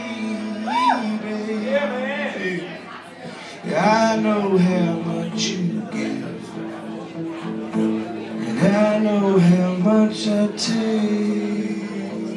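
No technical faults can be heard anywhere in the audio; the signal stays steady and intact throughout.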